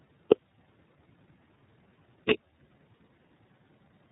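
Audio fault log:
Throughout, iLBC codec: the speech is hard-limited to narrowband with nothing above 4 kHz, and it has a plainly audible rough, slightly synthetic edge. The coding fits 30 ms frames at around 13.33 kbps, each frame's excitation coded on its own.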